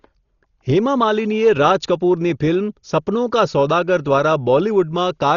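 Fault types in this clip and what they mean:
Dolby Digital compression: heavy coding damage, nothing above 7 kHz, dull with rough fluttery noise around tones, likely from a starved low-bitrate encode near 32 kbps.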